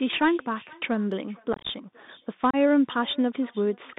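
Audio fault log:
throughout, echo with no canceller: every phrase is trailed by a faint, thin copy of itself about half a second later, sitting about 28 dB below the direct speech, so it is easiest to catch in the gaps after phrases end. The far end is playing the call over a loudspeaker, its microphone picks that sound up, and nothing subtracts it, so the talker's own speech returns after travelling out and back across the network.
throughout, Bluetooth CVSD headset codec: the speech is boxed into a telephone band of roughly 150 Hz to 3.7 kHz, with a granular hiss underneath, scratchy s sounds and roughness on loud bright moments, all plainly audible. This is the narrowband Bluetooth headset link at 64 kbps, where each sample is a single up-or-down bit with an adapting step size. Fast, loud high-frequency movement outruns that step and distorts, and the coarse one-bit stepping leaves the hiss.
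1.53 to 1.69 s, unconcealed Bluetooth headset packet loss: over about 165 ms the speech is chopped into a rough, crackly stretch, with about 105 ms of it missing in short holes, the longest about 22.5 ms. Small voice packets between headset and phone were dropped and replaced with silence or an idle pattern rather than patched over, so each gap has hard edges, and the speech comes back briefly quieter after each one.
2.51 to 2.56 s, unconcealed Bluetooth headset packet loss: a short loss of about four packets removes about 30 ms of sound in abrupt cuts, with a moment of reduced level as the speech resumes. Again the lost headset packets were filled with silence or an idle pattern instead of concealed. The hole is brief and isolated, unlike the longer crackle heard earlier.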